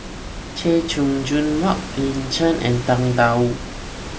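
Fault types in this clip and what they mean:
No technical faults turn up in the signal chain; the background noise, sitting about 13 dB below the speech, belongs to the room where the microphone was and is part of the original recording.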